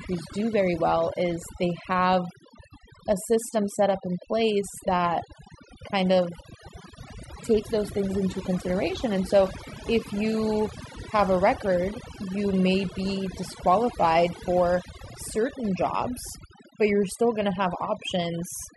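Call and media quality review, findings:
Overdone noise removal across the whole speech clip: background pulled down with twinkly specks. Denoiser set too hard, pulling frequency bands down whenever they sit near its noise estimate, so quieter bits of the voice get gated out too.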